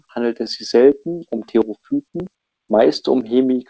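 A speech clip carried over a call path whose G.722 coding leaves nothing above 8 kHz, with clock drift between sender and receiver running through it. The sender's clock runs about 3% slow, so the receiver's jitter buffer keeps draining. Unlike packet loss, which leaves isolated gaps or smeared concealment, this produces a steady, one-directional slippage across the whole clip. From 0.44 s to 3.60 s, repeated timing corrections keep the receiver in step by stretching the sound with small repeated pieces, playing at 97% speed and adding roughly a tenth of a second in all. These repeats are always lengthening, never cutting, at uneven intervals rather than the regular rhythm of a fixed buffer fault.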